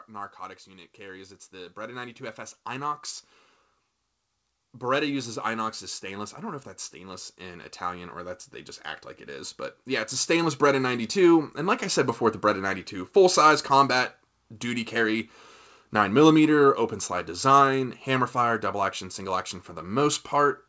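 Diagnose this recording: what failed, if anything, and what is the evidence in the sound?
The speech and its background swell together twice: a rise of about 6 dB from 0.06 s to 3.08 s, then a slower, larger climb of about 11 dB from 4.72 s to 12.9 s, ending just before "full size combat duty". This is automatic gain rising in the call processing stage, where the gain control judged the input too quiet and raised its gain gradually. The G.722 path keeps nothing above 8 kHz.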